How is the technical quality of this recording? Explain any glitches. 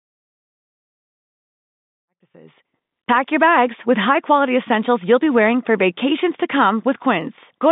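One brief glitch can be heard in this telephone-band speech, carried through G.711 coding and fading in from around 2 s to 3.32 s.

Packet loss with pitch repetition, 2.32 to 2.34 s, right after "safe and ethical manufacturing": about 20 ms of audio went missing, which fits a single lost packet, and the receiver filled the gap by repeating the last pitch period. It sounds like a fleeting, slightly held buzz before the speech resumes.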